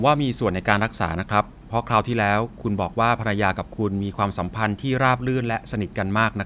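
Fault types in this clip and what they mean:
Nothing to flag here, as no technical faults turn up anywhere in the recording.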